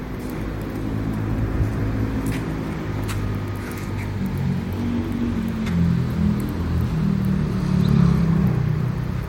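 From 0.0 to 2.0 s, an adaptive stream starting at a low bitrate: the player began on a lean version, consistent with Opus near 32 kbit/s, so treble sounds thin and smeared until it abruptly steps up, seamlessly.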